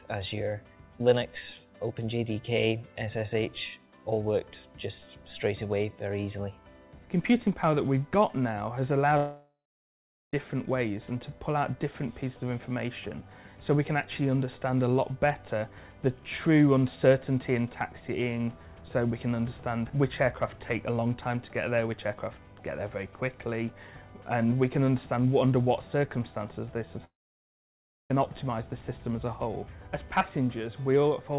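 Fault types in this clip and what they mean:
Long network dropout: at 9.17 to 10.34 s and again at 27.05 to 28.11 s the audio stops, most likely because packets stopped arriving for over a second. The receiver briefly stretches the last sound into a fading buzz, then goes quiet, for about 0.77 s the first time and about 1 s the second. When the sound returns, the lost stretch (1.16 s and 1.05 s) is simply missing.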